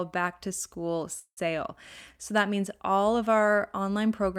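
At 1.19 to 1.39 s a call audio freeze, likely from delayed packets emptying the jitter buffer, holds the last sound as a fading buzz, a decaying smear on a spectrogram. An 80 ms flat line follows, then speech resumes intact, 175 ms late.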